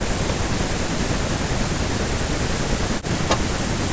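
From 0.0 to 3.48 s the speech repeatedly sinks, sometimes by about 40 dB, for roughly three seconds in total, likely speech suppressed in double talk, with the echo canceller muting it while the far side spoke. At 3.29 to 3.37 s a scrap of the voice returns about 0.42 s late at about the same level as the speech, likely an echo leak from a loudspeaker's uncancelled pickup. At 3.66 to 3.76 s the speech briefly drops out again, likely from the same suppression.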